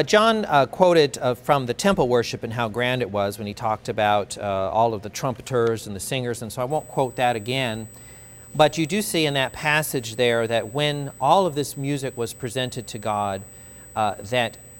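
From 6.70 s to the end of the clip, current drawn by the USB bus in 125-microsecond microframes leaks into the audio through the power or ground path. The result is USB whine, a fixed-pitch tone at 8 kHz sitting roughly 25 dB below the signal.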